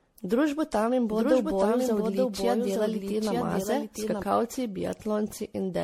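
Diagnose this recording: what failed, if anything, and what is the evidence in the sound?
Across the whole take the speech sounds swirly and hollow, with smeared consonant attacks and nothing above 16.4 kHz. That points to generation loss at the codec stage, likely from MP3 being decoded and re-encoded around ten times, each pass adding fresh quantisation damage.

From 1.11 s to 4.23 s there's a doubled audio track: a full-band copy trailing by about one second, roughly 5 dB down, dry and cutting in and out abruptly. Likely an editing slip that left two out-of-step copies summed together.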